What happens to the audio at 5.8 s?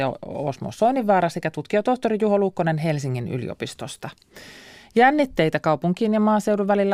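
At 5.8 s the speech carries on intact, with no dropout, click, distortion or other fault.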